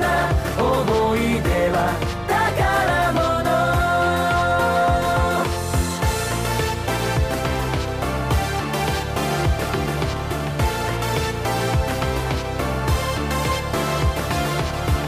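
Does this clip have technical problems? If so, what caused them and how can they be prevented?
No, no technical faults heard.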